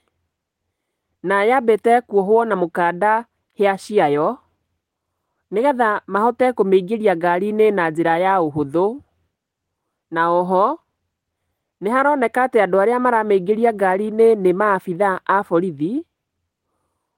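Speech, with no audible faults.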